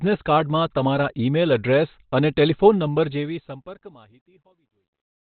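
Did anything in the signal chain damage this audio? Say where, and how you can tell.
Yes. At the codec stage, the speech sounds muffled and hoarse throughout with nothing above 4.5 kHz. That's likely Opus compression in narrowband SILK mode at around 16 kbps.

The fade-out from about 3 s shows truncation distortion. It turns gritty from 3.08 s and is worst from 4.07 to 5.29 s, which fits an undithered 12-bit gain stage stepping the waveform.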